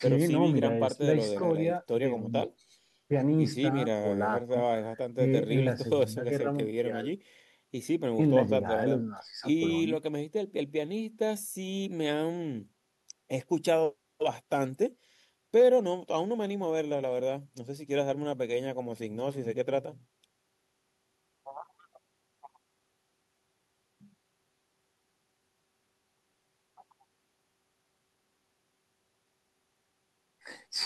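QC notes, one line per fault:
No faults found in this clip.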